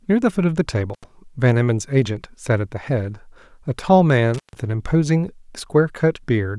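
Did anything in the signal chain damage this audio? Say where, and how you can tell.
Yes, in the analogue wiring: an intermittent contact, a loose cable or plug briefly breaking the connection. The speech drops out with crackle at each edge, once from 0.94 to 1.04 s (open for about 80 ms) and again from 4.34 to 4.58 s (open for about 144 ms).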